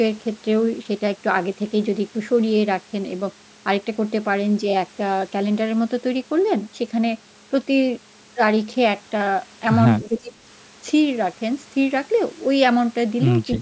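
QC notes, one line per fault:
10.02–10.41 s, speech suppressed in double talk: the speech dips by about 20 dB for nearly half a second, likely an echo canceller muting its own talker while the far side spoke.
13.58 s to the end, speech suppressed in double talk: a similar drop of about 20 dB clips the last few hundredths of a second.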